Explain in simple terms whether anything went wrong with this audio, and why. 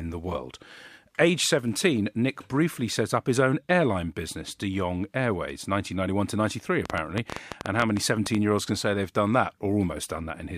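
Between 6.86 and 8.36 s a train of clicks cuts into the speech: around fifteen sharp ticks at an uneven pace of roughly nine per second, standing out well above the voice. The likely cause is electrical interference or a faulty connection or power supply.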